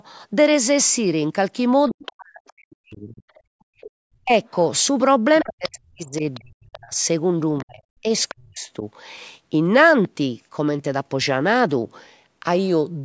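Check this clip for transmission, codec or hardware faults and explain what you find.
Two call-processing faults show up, both tied to moments when the other side is playing on the loudspeaker; the speech itself passes through the call's microphone chain, which takes out only the lowest bass.

The other side's voice leaks through from 1.89 to 3.91 s, 5.34 to 6.4 s and 7.58 to 8.35 s, about 20, 15 and 20 dB below the main speech. The likely cause is loudspeaker playback reaching the microphone that the echo canceller failed to remove. Unlike crosstalk or a mixing error, it is a faint extra voice.

Speech is suppressed in double talk from 1.9 to 4.32 s and 5.43 to 8.84 s, dipping by as much as roughly 40 dB for around 1.5 s and 2 s in total. Both voices are likely active, so the canceller turns everything down. Packet loss would not track the far voice like this.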